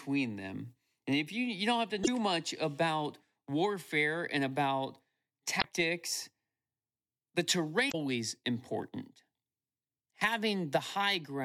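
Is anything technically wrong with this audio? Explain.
Yes. Damaged data in the compressed stream produces brief glitches at 2.0 to 2.08 s, 5.58 to 5.65 s and 7.88 to 7.95 s, each about 70 to 80 ms long. In each spot the decoder receives corrupted frames, misreads them and loses sync until it finds the next valid frame header.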